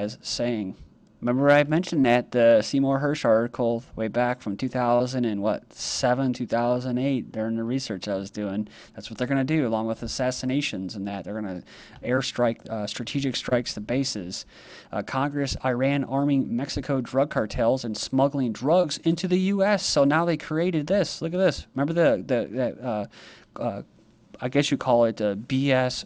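The audio has short concealed packet loss at six points: 0.67–0.72, 2.02–2.05, 4.95–5.02, 12.16–12.19, 13.49–13.53 and 18.81–18.85 s. Each time, about 20 ms of audio (40 ms near 5.0 s) arrived too late to decode. The receiver covered the gap by extending the preceding sound and then crossfading back, so each spot is a brief smear or wobble rather than the hard silence or clean cut of an uncovered dropout.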